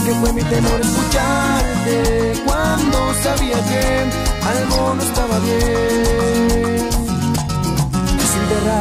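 No technical faults detected.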